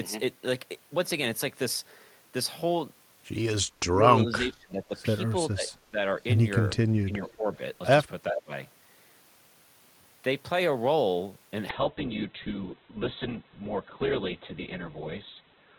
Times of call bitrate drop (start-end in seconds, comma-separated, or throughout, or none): 11.70-15.78